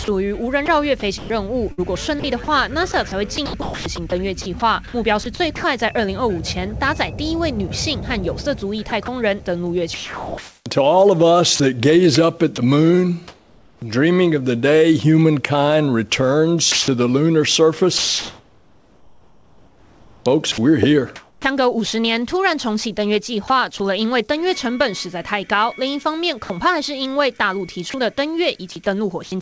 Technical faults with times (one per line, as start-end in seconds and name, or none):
0.04-5.64 sound chopped by the voice detector
8.90-13.82 sound chopped by the voice detector
16.72-21.44 sound chopped by the voice detector
23.48-23.80 sound chopped by the voice detector
26.44-26.50 sound dropped by the voice detector
27.90-29.32 sound chopped by the voice detector